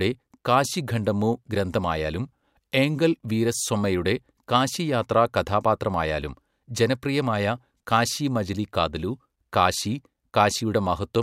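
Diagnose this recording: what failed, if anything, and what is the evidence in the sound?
No failure is evident in this speech recording; nothing in the sound points to a problem at any stage from capture through playback.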